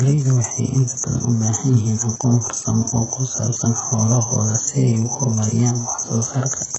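From start to finish the speech carries heavy codec damage, most likely from HE-AAC compression at a very low bitrate, which fits something near 8 kbps. Only the lower band is truly coded; the treble is synthesised by copying lower bands upward under a coarse envelope, so its harmonics fail to align with the real ones. S sounds come out gritty and lispy with a metallic edge, and nothing at all is present above 8 kHz.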